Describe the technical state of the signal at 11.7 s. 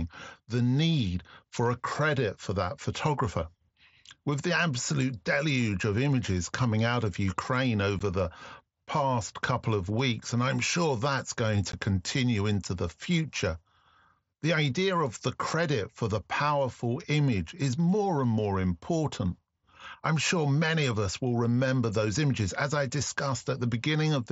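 At 11.72 s, between "I'm sure that's going" and "continue into the future", there is unconcealed Bluetooth headset packet loss. About 15 ms of speech drops out, which fits two lost mSBC packets. Nothing fills the gap. Its abrupt edges give a brief hole.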